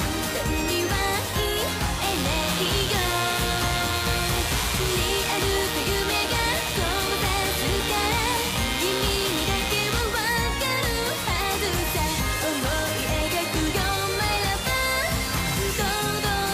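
From 2.02 to 10.02 s, a raspy mains buzz sits fairly loud under the sound: 60 Hz switching spikes spray harmonics into the kilohertz range, unlike a smooth low hum.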